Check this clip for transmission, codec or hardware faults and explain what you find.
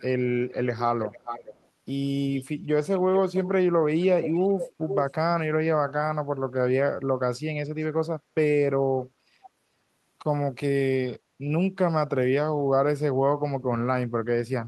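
One fault recurs: an echo leak, at 0.48–0.53, 1.01–1.68, 2.38–2.45, 3.15–3.49, 4.22–5.11, 7.81–7.86 and 9.42–9.50 s. The far end's echo canceller likely let some of its loudspeaker pickup through, so the speech comes back as a delayed copy about 0.45 s late, drifting slightly later over the clip. Most returns are faint scraps well below the speech, but the one at 4.22–5.11 s is nearly as loud as the speech itself.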